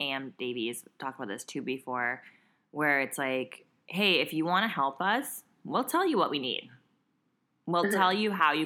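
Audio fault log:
No faults are audible anywhere in this speech recording.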